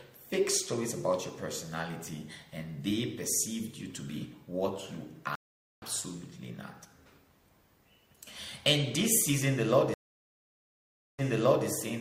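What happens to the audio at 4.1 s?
Nothing goes wrong at 4.1 s; the audio runs through that moment without any dropout, glitch or other audible fault.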